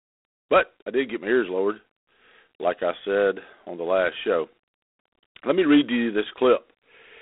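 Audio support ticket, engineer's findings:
Harsh rasping hiss riding on the speech level throughout; band roughly 250 Hz to 3.6 kHz, nothing above 3.8 kHz. G.726 ADPCM telephone codec, coarse quantising of prediction differences; grain level fits 24 kbit/s.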